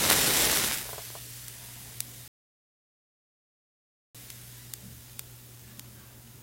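A rebuffering stall interrupts this recording of sounds: at 2.28 s the player exhausts its downloaded audio and waits for more data. The sound drops to silence until 4.15 s, then resumes exactly where it stopped, with nothing lost but about 1.87 s added.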